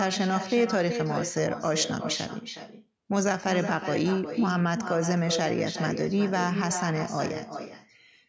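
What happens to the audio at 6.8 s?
At 6.8 s the speech is shadowed by a quieter, thinner copy of itself arriving about four tenths of a second later, sitting about 8 dB below the direct sound. This is echo with no canceller, and it runs through the whole clip, not just this moment. The far end is playing the call through a loudspeaker, its microphone picks that up, and nothing strips it out before it returns over the network.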